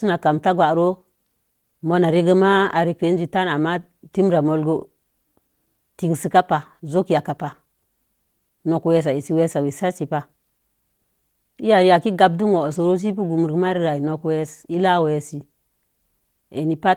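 No technical faults can be heard in this speech recording.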